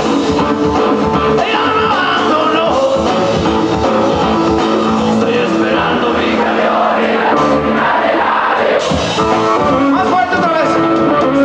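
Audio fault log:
No faults detected anywhere in the clip.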